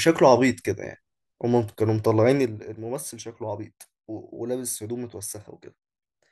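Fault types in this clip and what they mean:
Zipper noise: speech level falls about 10 dB in unsmoothed 1 dB steps, roughly twenty a second, from 2.28 to 2.83 s, each one clicking.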